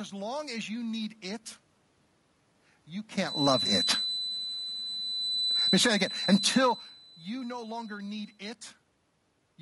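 A speech recording with a handful of stacked problems, starting with coding damage you can hear the whole way through. The voice has a rough, grainy texture, with a hissy fill between the harmonics and a top end that sounds thin and slightly synthetic rather than airy. That's the signature of low-delay AAC compression, likely AAC-ELD running at a modest rate, something like 32 kbps. Its short frames can't pin down pitch harmonics cleanly, so the voice loses its smoothness. From 3.17 s to 8.42 s a thin, steady tone sits at 4 kHz behind everything, well below the speech and wavering a little in level. It sounds like a feedback whistle: likely a loudspeaker-to-microphone loop teetering on the edge of feedback, ringing at one frequency without ever running away. At 3.63 s, inside that whistle stretch, there's a brief smeared, phasey blip lasting about 20 ms. That's AAC frame loss with concealment, and the length fits a single lost frame. 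The decoder papered over the gap by reusing the last good spectrum with some randomising, which is why you get a smudge instead of a dropout. Around 5.55 s to 6.03 s the level sinks by about 13 dB, with the room noise going down together with the voice. That's automatic gain falling: the gain control decided the input was too hot or its background noise too strong and eased its gain back over roughly half a second. Right on its heels, from 5.94 s to 6.9 s, comes automatic gain rising, where the level climbs back about 10 dB and the voice and background swell up together. What triggered it was the input dropping by about 24 dB, so the control hauled its gain back up to compensate. Part of that level movement also lines up with the talker shifting position near 6.5 s, and there's a similar move near 3 s. Those are just someone moving relative to the mic, and the room noise underneath is simply part of the recording.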